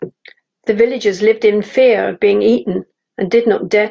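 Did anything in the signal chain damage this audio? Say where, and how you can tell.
No, nothing in the signal chain damaged this speech.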